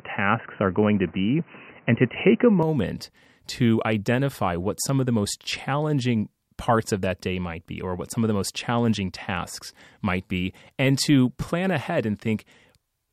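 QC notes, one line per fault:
0.00 to 2.63 s, input switched to a poorer device: the opening stretch of speech sounds dull and boxy, with nothing above 3 kHz, a level a few dB off from the rest, and its own faint background noise sitting well under the voice. At 2.63 s it clears up abruptly, with no gap at the changeover. That points to the recording likely starting on a narrowband mic or headset call profile before moving to the proper input.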